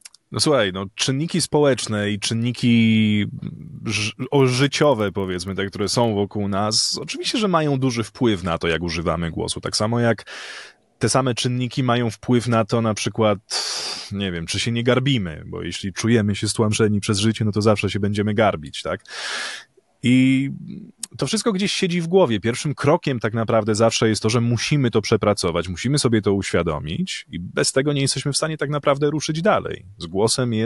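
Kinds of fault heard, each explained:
Resampler restarted on every block: each 40 ms block upsampled alone from 24 kHz to 48 kHz, leaving edge errors, a 25 Hz buzz that vanishes in pauses, unlike hum.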